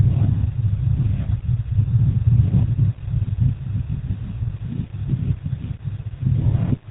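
A speech recording that carries GSM full-rate codec damage from start to finish, plainly audible as a buzzy, gravelly roughness, with a sound that fits the 13 kbps full-rate coder. The codec rebuilds the vocal tract from a filter model excited by sparse, regularly spaced pulses, discarding two of every three excitation samples, which produces the grit. On a spectrogram, energy stops at a hard ceiling near 4 kHz, and the harmonics look smeared and coarse throughout.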